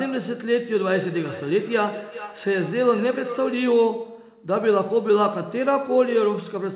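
From 0.93 s to 3.71 s the speech carries a feedback echo between two devices. A second device in the room plays the call aloud. This microphone hears it again. Each phrase returns roughly every 400 ms, thin and ringing, at its loudest about 14 dB below the speech.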